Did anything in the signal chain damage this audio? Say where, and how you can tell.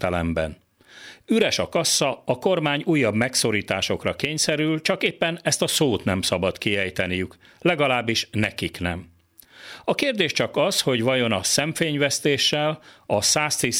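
No, nothing in the signal chain damaged this audio.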